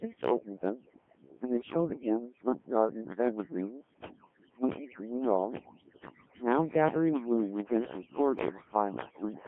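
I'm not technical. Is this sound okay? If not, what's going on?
No. Two problems run through the whole recording.

The first is overdone noise removal. A cleanup tool meant to strip out background hiss was set far too aggressively, so it shut off whole slices of the sound it judged to be noise, and the quieter parts of the voice went with them. The background drops to an unnatural near-silence dotted with twinkling specks.

The second is the Codec 2 vocoder, a very low-data system built for digital radio. Rather than sending the actual recording, it sends only a rough description: how high the voice is, how loud it is, and its general tone. The other end then rebuilds a voice from simple tones. Here that rebuilding is heavy, so the speech sounds robotic and buzzy, and the sound is confined to a narrow telephone-like range of roughly 200 Hz to 3.4 kHz.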